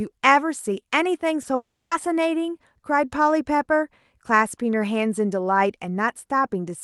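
At 1.41 to 1.45 s there is a short concealed packet loss: about 20 ms of the speech failed to arrive, and the decoder bridged the gap by extending the preceding sound. It is heard as a brief smear or wobble, and on a spectrogram the preceding sound runs on unnaturally smooth for that sliver before real detail resumes.

From 1.55 to 1.93 s comes a long network dropout, likely caused by audio ceasing to arrive for roughly a third of a second. The receiver first continues the last sound as a fading buzz or hiss, then leaves about 290 ms of near-silence until speech returns with that stretch missing, its upper edge still capped near 12 kHz by the Opus call path.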